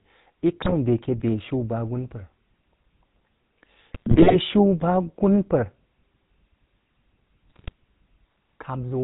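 A buzzy, gravelly roughness runs through the whole speech clip, with nothing audible above 4 kHz. That is the GSM full-rate codec, which fits a 13 kbps stream: it rebuilds the voice from a vocal-tract filter driven by a sparse, regularly spaced pulse train, and the damage is plainly audible. At 0.62 to 0.74 s, 3.91 to 4.36 s and 7.48 to 7.72 s, the voice breaks into squawks, pops and gargling. These are GSM bit errors, with corrupted filter, pitch and gain values distorting the spectrum and level frame by frame. The middle burst is the longest.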